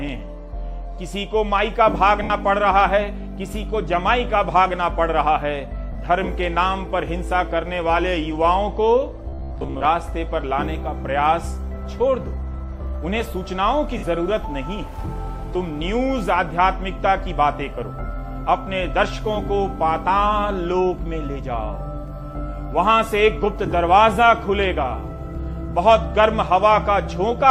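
At 2.23 to 2.30 s, 5.92 to 5.95 s, 13.98 to 14.03 s and 15.54 s you get lost LE Audio frames. Those gaps of 70, 30, 50 and 10 ms fit runs of 10 ms frames dropping out. The LC3 decoder papers over each one by replaying the last spectrum with scrambled phase, so the sound briefly smears into noise.

From 9.30 to 9.87 s there's robotic sound from repeated short buffers. A rigid buzz at 66.8 Hz comes in, which fits a buffer of about 15 ms being looped, likely because audio arrived too late and roughly half got replaced by repeats.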